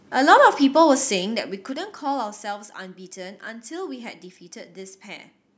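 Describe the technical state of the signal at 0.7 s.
At 0.7 s the speech signal is intact, with no fault to be heard at that moment.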